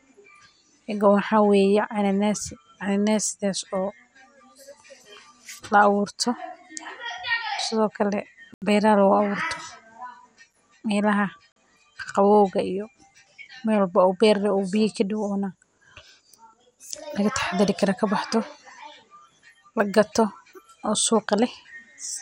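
MP2 compression runs through the whole speech clip, most likely from MPEG Layer II coding at a rate that sounds close to 80 kbps. The coder splits the signal into 32 sub-bands and rations bits among them. Here nothing survives above about 16.6 kHz, and the remaining bands are quantised coarsely and flicker in and out. The result is plainly audible: a dulled top end with a gurgling, grainy texture laid over the speech.

A block of digital silence appears at 8.54 s, lasting 79 ms. The sound cuts out and returns with no fade, and a short hole opens in the sound. A second block of digital silence at 11.52 s lasts 43 ms, which fits a 2048-sample buffer that went unfilled, and ends just before "qaqabowgga iyo", heard as a short hole.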